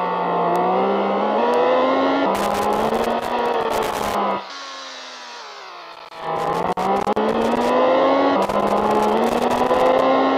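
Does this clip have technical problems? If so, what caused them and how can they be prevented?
Yes. Loose connector crackle appears in three irregular bursts, from 2.35 to 4.15 s, from 5.93 to 7.70 s and from 8.42 to 10.02 s, each lasting roughly 1.6 to 1.8 seconds. A worn or dirty contact somewhere in the cable path is losing and regaining connection as it shifts, so the sound is chopped into fragments, and any DC on the line turns each break into a pop, giving the scratchy, uneven crackle. Cleaning or replacing the suspect connectors and cables and strain-relieving them so they cannot move during recording would prevent it.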